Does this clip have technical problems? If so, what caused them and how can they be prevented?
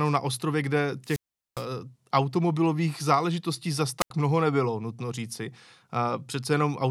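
Yes. The analogue wireless microphone's radio signal faded twice until the receiver's squelch shut off its output. This wireless microphone squelch dropout is heard as a short rise of hiss and then a gap of near silence. From 1.04 to 1.65 s the sound is muted for about 410 ms, with speech resuming on "automobilových záležitostí zas". From 3.99 to 4.10 s it is muted for about 83 ms, just before "mnoho nebylo nutno říci". Keeping the transmitter within clear line of sight and good range of a diversity receiver, with fresh batteries and well-placed antennas, prevents these fades.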